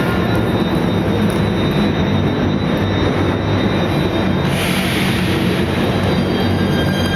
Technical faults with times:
none

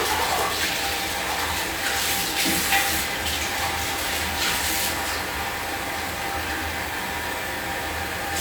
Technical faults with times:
none

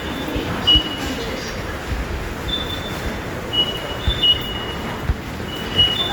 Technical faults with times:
0.00-6.13 Opus compression

